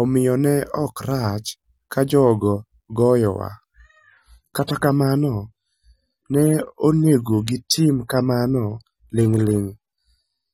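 At 3.86 s the speech abruptly loses quality with no gap, and it stays that way to the end. The adaptive stream has dropped to a lower bitrate, so nothing survives above 16.5 kHz and codec artefacts rise, which fits a step from about 96 down to 32 kbit/s AAC.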